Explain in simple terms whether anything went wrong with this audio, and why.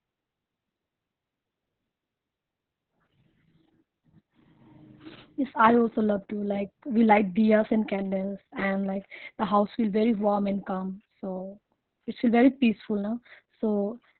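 Heavy Opus voice compression affects the whole clip. It was squeezed hard to save data, so nothing above 4.3 kHz survives. The speech sounds muffled, hoarse and slightly robotic.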